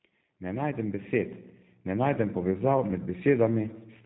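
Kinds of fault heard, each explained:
G.729 codec: The speech has been carried by the G.729A low-rate VoIP codec at 8 kbit/s, which does not transmit the waveform itself. It resynthesises each 10 ms frame from a vocal tract filter, a pitch predictor and a sparse set of excitation pulses. The damage is plainly audible. Nothing is left above 4 kHz, so consonants sound dull, and the voiced sounds come across rough and slightly synthetic. The thinning of the lowest bass comes from the call's microphone high-pass filter, which is normal.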